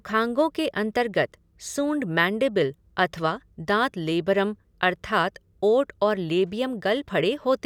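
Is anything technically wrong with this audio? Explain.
No, nothing technically wrong can be heard in this speech recording. There is no fault to explain here.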